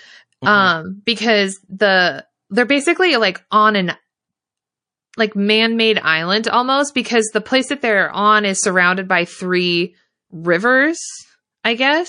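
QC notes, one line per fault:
Throughout: MP3 compression, likely from encoding at a low bitrate around 40 kbps. The damage is plainly audible. With so few bits available, the encoder drops the weaker frequency components, and these come and go from one frame to the next. The result is a watery, swirling texture across the whole clip, with a metallic chirp on sibilants and softened consonant attacks.
3.50 s: pre-echo, between "the they're basically like" and "on an". A short hiss rises about 12 dB and runs for roughly 16 ms ahead of a sharp onset. The encoder kept a long transform block of about 52 ms at this point and never switched to short blocks. The quantisation noise sized for the loud onset was therefore spread back into the quiet moment before it, so the attack arrives smeared and softened.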